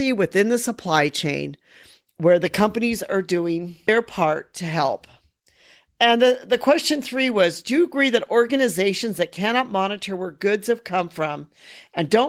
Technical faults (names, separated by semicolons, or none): none